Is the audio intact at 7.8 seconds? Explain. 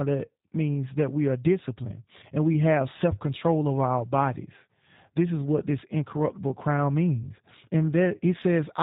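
No, at 7.8 seconds the speech is still carrying the G.729 codec damage that runs through the whole clip. That codec doesn't store the waveform. It rebuilds speech from a vocal-tract filter, a pitch predictor and a few pulses per short frame, with everything above 4 kHz cut off. You can plainly hear it as dull, band-limited speech with a rough, slightly synthetic edge, which fits the 8 kbit/s G.729A variant.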